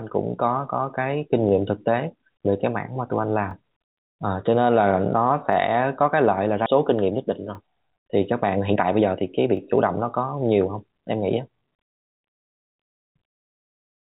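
At 1.49, 3.51 and 5.53 s there are brief stutters from overlapping chunks. The speech was handled in 2-second chunks that each began 20 ms before the previous one ended. That 20 ms slice plays twice, giving a regular click.

At 6.66 s playback skips ahead. Around a second and a half of speech is missing. The jitter buffer likely dropped audio that was already queued, so the two sides of the jump meet with no gap.

From 6.78 s to the end, a jitter buffer speed-up plays the speech at 111% of normal pace. Short pitch-period pieces are repeatedly cut to shrink the backlog. The pitch stays the same, but the talking sounds rushed.

The 2-second stutters continue at 7.55, 9.57 and 11.59 s. Throughout, the call path leaves nothing above 4 kHz, which fits a narrowband telephone codec.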